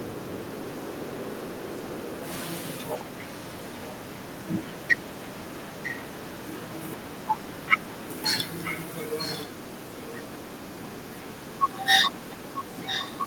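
Speech with echo leak: a delayed copy of the voice returns about 941 ms late at 2.63–4.22 s (well below the speech), 5.46–5.97 s and 8.63–10.41 s (about as loud), and 12.85–13.17 s (louder). This is likely a far-end loudspeaker echo that its canceller failed to suppress.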